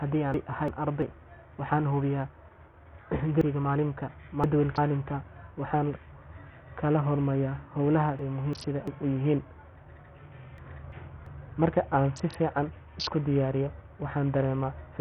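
Throughout the speech, the top end is missing: nothing is heard above 11.5 kHz. The treble flickers, and a gritty, coarse grain rides on everything. This likely comes from heavy Bluetooth SBC compression at a low bitrate, around 48 kbps, starving the upper bands of bits.

Chunks out of order appear four times: 0.34 to 1.02 s, 3.41 to 4.78 s, 8.19 to 8.88 s just before "u yihiin", and 10.58 to 11.26 s. Each is built from 0.34 s blocks. A block plays late, after the ones that should follow it. That causes a jumbled moment with hard joins. The longer span starting at 3.41 s points to a block three chunks late. The others sound one chunk late.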